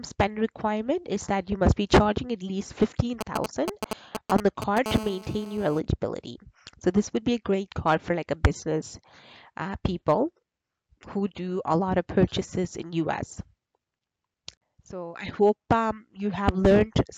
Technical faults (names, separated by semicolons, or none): GSM signalling bursts; GSM phone buzz